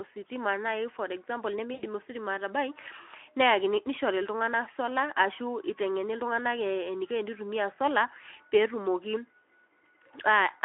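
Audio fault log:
1.73–1.83 s, VoIP packet loss concealed by the speech codec: right after "ositima naaji for example", about 80 ms of speech goes missing, which fits four lost 20 ms packets. The decoder fills the hole by repeating its last pitch and spectral shape at falling gain, so the speech smears into a fading buzz or coloured noise instead of dropping to silence or clicking as a plain dropout would. Because each guessed frame feeds the next, the recovery after the gap stays weak and rough, on top of the light coding damage of the Speex codec on the telephone-band line.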